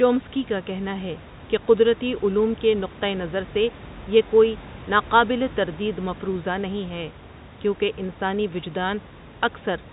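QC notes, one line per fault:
Nothing stood out on listening to this speech recording.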